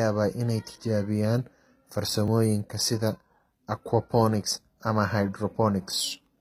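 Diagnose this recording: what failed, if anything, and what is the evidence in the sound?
The speech has a bright but synthetic top end throughout: sibilants come out gritty and lispy, and nothing is present above 14.9 kHz. The damage is plainly audible and points to a codec-stage fault, likely HE-AAC compression at a low rate, around 20 kbps. The encoder keeps only the lower spectrum and regenerates the treble by copying lower bands upward under a coarse envelope. The rebuilt harmonics don't align with the real ones.

Two tiny skips occur at 2.28 s and 4.77 s, about 2.5 s apart. At each, the sound jumps forward slightly, with the two sides butted together and no silence between them. The regular spacing points to the driver or buffer stage, likely audio missing between chunks. The recorder handles audio in 2.5-second blocks and drops a few milliseconds while closing one block and opening the next.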